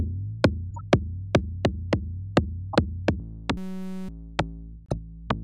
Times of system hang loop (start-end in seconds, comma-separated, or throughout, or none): 3.57-4.09